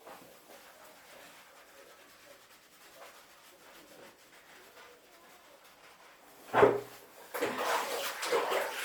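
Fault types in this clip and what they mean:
Bluetooth LC3 compression: the audio was likely encoded with Bluetooth LE Audio's LC3 codec in 10 ms frames, at a rate the damage suggests is near 48 kbps. Plainly audible coding artefacts run through the whole clip, with nothing above 20.2 kHz.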